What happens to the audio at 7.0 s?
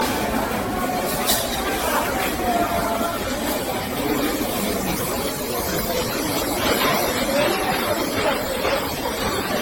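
At 7.0 s the sound carries generation loss, which runs through the whole clip rather than starting there. It is smeared and hollow, with a swirly texture, blurred attacks, and nothing above 16.6 kHz. The likely cause is repeated lossy encoding, about ten passes of AAC-LC at roughly 64 to 82 kbit/s. Each pass re-quantised the audio on a shifted frame grid, so noise and spectral holes built up beyond what one encode at that rate would leave.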